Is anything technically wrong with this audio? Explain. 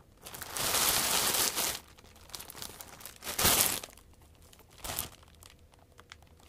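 No, nothing technically wrong can be heard in this recording of sounds. There is no fault to point to at any moment in the clip.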